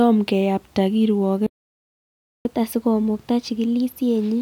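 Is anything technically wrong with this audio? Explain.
Yes, there are two linked problems. At 1.46 s the speech cuts out to silence and doesn't return until 2.45 s, a gap of almost exactly a second. That's a playback stall. The audio simply halts mid-flow and then resumes. The likely cause is the player running dry of buffered data, or its output thread getting blocked, so nothing reached the output until it recovered.

From 2.45 s right through to the end at 4.42 s there's a catch-up at higher speed. The player is running at 1.1 times normal speed to claw back some of the time it lost. Because it does this by resampling rather than time-stretching, the pitch goes up along with the tempo, by roughly a semitone and a half. You hear a slightly hurried, raised-sounding voice that stays that way until the clip ends.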